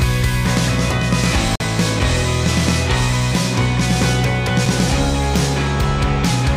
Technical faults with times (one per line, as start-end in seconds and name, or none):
1.55-1.64 digital broadcast dropout